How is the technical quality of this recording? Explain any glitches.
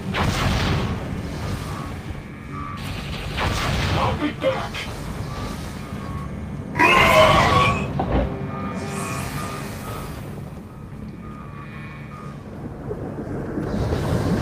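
No glitches turn up anywhere in the recording. There are no dropouts, clicks or sudden level changes to explain.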